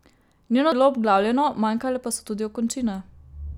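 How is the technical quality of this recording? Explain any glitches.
The recording has one glitch, at 0.72 s, just before "bilo obglavljeno manjkale". It is damaged data in a compressed stream: part of the encoded speech was corrupt, so the decoder misread those frames, lost its place and had to resynchronise on the next valid frame header. The result is a short disruption, a chirp, squawk, click or brief hole, where decoding broke down before picking up again.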